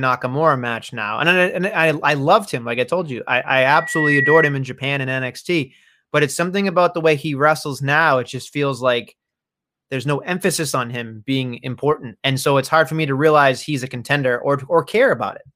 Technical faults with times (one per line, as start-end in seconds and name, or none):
3.63-4.59 loudspeaker feedback squeal